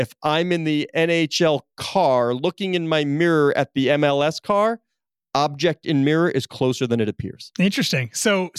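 There are no technical faults to describe in time order anywhere in this speech clip.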